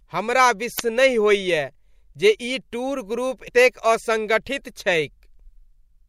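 At 0.76 to 0.80 s the speech breaks into a short glitch, and at 3.47 s a briefer blip follows. Both are damaged data in a compressed stream: bytes in the encoded file were corrupted, so the decoder misread those frames and had to hunt for the next valid header before resuming. On a spectrogram each shows as a narrow vertical smear of broadband or tonal energy cutting across the harmonics. On the waveform it appears as a jagged discontinuity.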